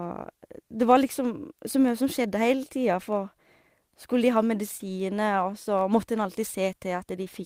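This is a speech recording with two faults. A steady buzz at about 92 Hz runs through the whole clip. It comes from a block size mismatch (truncated). One stage writes blocks slightly longer than the next stage reads, so the tail of every block is discarded. Each cut leaves a small discontinuity, and these repeat at the block rate to form the buzz. The two block sizes are almost equal, so pacing and pitch stay close to normal. From 4.77 to 4.82 s there is a short concealed packet loss. About 20 ms of audio never reached the decoder in time. The receiver covered the gap with roughly 22 ms of synthesized sound, extending what came just before it, and then blended back into the real signal. The result is a brief smear or wobble in the speech at that point.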